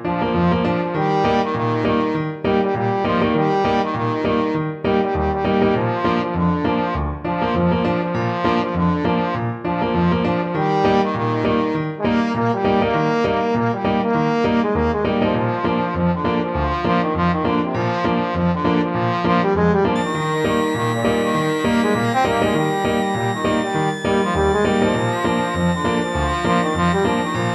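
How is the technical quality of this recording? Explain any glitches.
A switching supply whistle spoils the final part. From 19.96 s to the end, a high whistle wanders between 1.7 and 1.97 kHz, roughly 15 dB below the main sound. A switching power supply is cycling audibly. On a spectrogram it shows as a thin, drifting horizontal line.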